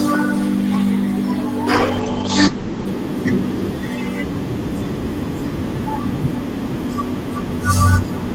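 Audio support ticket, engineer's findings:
Call bitrate drop, 1.74–2.93 s: speech turns muffled and watery. Encoder starved, consistent with roughly 32 to 11 kbps. Spectrogram: content above 8 kHz vanishes, flat ceiling.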